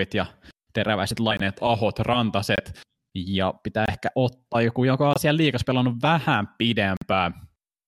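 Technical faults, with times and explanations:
1.37–1.41 s, 2.56–2.60 s, 3.86–3.89 s, 5.13–5.18 s, 6.97–7.04 s: corrupt frame muted. Damaged compressed frames were rejected and replaced by abrupt silences of one or two frame lengths. Unlike concealment, nothing fills the gap, and the timing doesn't shift.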